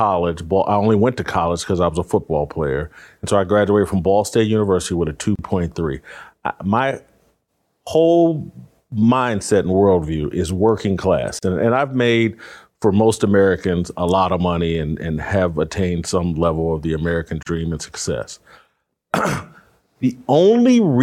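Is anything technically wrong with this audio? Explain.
Yes, there's a gap at a join of encoded pieces at 5.36, 11.39 and 17.43 s, roughly every 6 s. Separately encoded chunks were butted together untrimmed, leaving 34 to 37 ms dropouts with smeared edges before the speech resumes.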